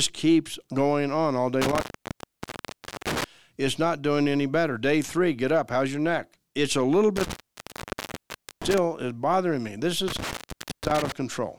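Intermittent contact breaks the speech three times, between 1.62 and 3.24 s, 7.17 and 8.78 s, and 10.08 and 11.12 s. The line opens for about 1.26 s, 1.29 s and 0.54 s. Each time a loose connection drops the signal, crackle marks the edges, and faint hiss remains inside. On the waveform the speech collapses to a thin noise floor with spiky bursts at each boundary. A spectrogram shows sharp vertical broadband streaks framing nearly empty gaps.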